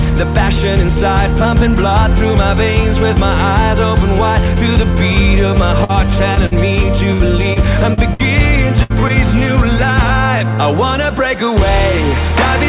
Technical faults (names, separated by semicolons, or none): burst of packet loss; short concealed packet loss; repeated packet loss (robotic sound)